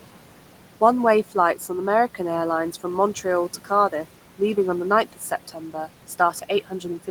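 From start to finish, noise suppressor artifacts shape the background. The suppressor treats the room noise, which sits about 19 dB below the speech, as steady noise and pulls those bands down by about 12 dB frame by frame. The noise floor drops away in the pauses and comes back up under each stretch of speech, so the background seems to breathe with the talking. On a spectrogram, the gaps between words show a darker, thinner noise floor, and the broadband haze returns wherever speech energy appears.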